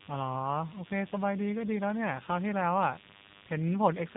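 A short speech recording carries two faults from start to finish. The first is DECT cordless phone buzz. A thin, steady buzz sits at 100 Hz with a dense stack of harmonics above it. It runs roughly 20 dB below the speech. A nearby DECT handset or base transmits a brief radio burst every 10 ms. The audio circuitry rectifies those bursts into this repeating tone. The second fault is G.729 codec damage, and it is plainly audible. Nothing passes above 3.8 kHz, so the speech sounds muffled and narrow. The voice has a rough, slightly synthetic edge. The codec rebuilds each 10 ms frame from a vocal tract filter, a pitch predictor and a few pulses. The sound points to an 8 kbit/s G.729A coder.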